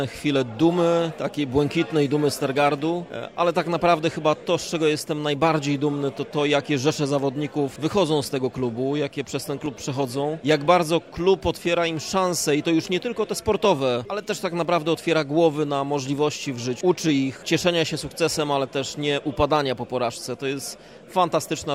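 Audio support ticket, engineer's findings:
Periodic USB or driver dropouts, 9.66 s to 14.65 s. Regular ticks at 1.0 s spacing, around seven in total, audible only over signal. Each about half a millisecond of audio skipped outright, not silence-filled. Probable component: USB audio interface or its driver, blocked on a fixed schedule by a background task, so the stream jumps forward slightly at every stall.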